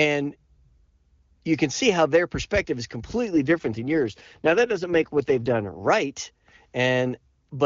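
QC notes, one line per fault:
3.32–5.90 s, AMR rate drop: the speech turns rough, raspy and synthetic, with no gap or narrowing of bandwidth, then clears. The coarseness points to the HD Voice link falling from 23.85 to 8.85 kbit/s, trading speech detail for error protection.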